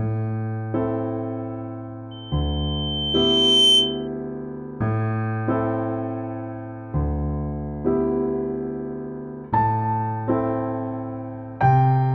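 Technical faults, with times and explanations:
2.11–4.08 s, loudspeaker feedback squeal: a single 3.1 kHz tone swells over about one and a half seconds to roughly 10 dB above the sound, because the microphone re-captures its own loudspeaker with loop gain above one. Spectrograms show one brightening horizontal line, and the waveform envelope balloons.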